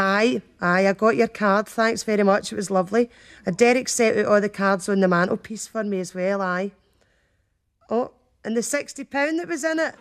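From 5.47 s to the end, one channel likely drops out, so the summed sound falls abruptly by about 6 dB and stays there.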